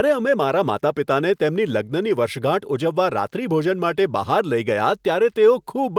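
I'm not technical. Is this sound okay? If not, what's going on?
Yes, it's fine: nothing in this speech recording sounds wrong, so you're all set.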